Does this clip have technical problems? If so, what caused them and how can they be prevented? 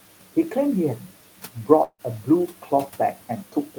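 Yes. There is a long network dropout from 1.83 to 2.02 s. At 1.83 s the speech gives way to a buzzy continuation of the last sound that fades out, followed by about 60 ms of near-silence where only the room noise (about 20 dB below the speech) remains. Speech resumes at 2.02 s with roughly 160 ms of audio missing. The likely cause is a break in packet delivery, during which the receiver's concealment synthesised about 151 ms before giving up. Prevention means a more stable connection, with forward error correction or a deeper jitter buffer to ride out short outages.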